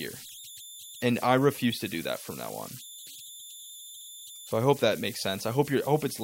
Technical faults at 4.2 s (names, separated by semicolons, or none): converter idle tones